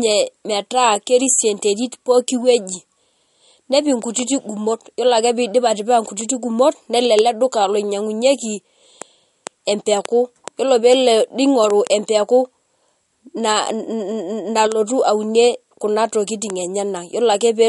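Speech that sounds watery and swirly throughout, with nothing above 11.2 kHz, likely from MP3 compression at a low bitrate, near 48 kbps.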